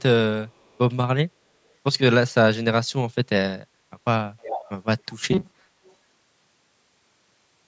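Echo leak appears at 0.48 to 0.78 s, 4.4 to 4.7 s, 5.09 to 5.18 s and 5.84 to 5.94 s: a copy of the speech returning 282 ms late. It is barely audible in the first stretch, quite prominent at 4.4 s, and faint in the last two. This is likely a far-end loudspeaker pickup that the echo canceller failed to suppress.

From 5.33 s to the end, the speech turns into a rigid metallic buzz at 188 Hz that still roughly tracks the syllables. This is robotic sound from repeated short buffers, likely caused by audio arriving late. A segment of about 5.3 ms is looped to fill the gaps, replacing most of the real signal.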